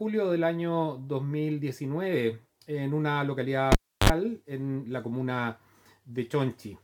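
At 3.72 s a cable gets pulled and plugged back in: a pop, about 325 ms of near silence, a brief 50 Hz mains buzz, then another pop at 4.10 s.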